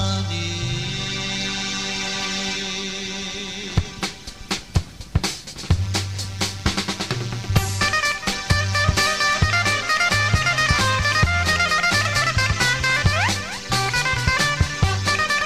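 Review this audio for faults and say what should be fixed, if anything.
No technical faults can be heard anywhere in the audio. Nothing needs to be fixed.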